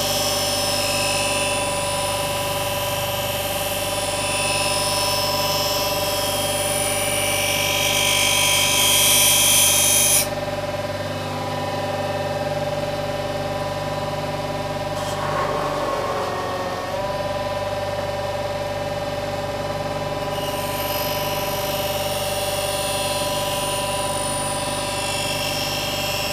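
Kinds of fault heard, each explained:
No technical faults can be heard in this recording of sounds. There is nothing here that calls for a line of explanation.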